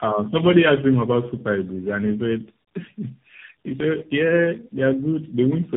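Tandem speech coding runs throughout: three speech codecs in a row, AMR-NB among them, each re-encoding degraded output, leaving rough, muffled, warbly speech with nothing above 3.7 kHz.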